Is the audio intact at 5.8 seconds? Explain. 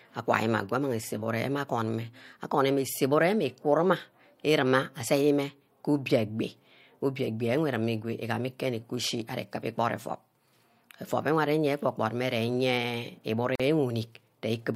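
Yes, at 5.8 seconds the speech plays through without any dropout, click, distortion or other technical fault.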